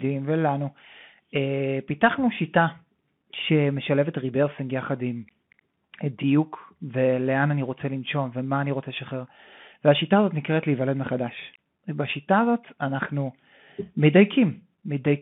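Throughout the speech the Bluetooth CVSD headset codec is at work. The band runs only from about 150 Hz to 3.5 kHz, and the one-bit delta coding, which fits a 64 kbps stream, cannot track fast loud detail, leaving plainly audible granular hiss and scratchy sibilants.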